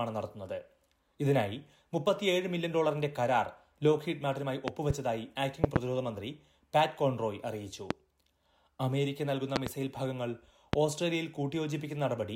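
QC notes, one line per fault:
4.68–4.93 s, 5.64–5.79 s, 7.91–7.93 s, 9.56–9.69 s, 10.73–10.76 s: loud pop, single or double, about 20–25 dB above the sound. Likely voltage spikes from plugs, switches or static.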